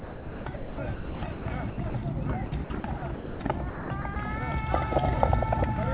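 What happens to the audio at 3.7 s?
From 3.7 to 4.16 s the sound drops out in patches, with about 240 ms in total replaced by a synthetic hiss, likely sound chopped by the voice detector, which gates transmission on and off and fills the gaps with comfort noise over the band-limited, below-4 kHz call audio.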